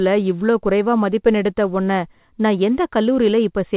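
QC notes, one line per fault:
No faults to log; the speech comes over a normal WebRTC call path with G.711 mu-law at 64 kbps, so nothing is heard above 4 kHz.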